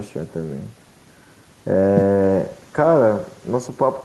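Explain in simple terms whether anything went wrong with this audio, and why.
Something did go wrong, and it lasts the whole recording: an echo with no canceller. Every bit of this speech is followed, roughly a tenth of a second later, by a fainter, thinner copy of itself. That happens when the far end of a call plays the sound through a loudspeaker, its microphone picks it up again, and nothing strips it out before it travels back. The result is a constant shadow trailing the talker.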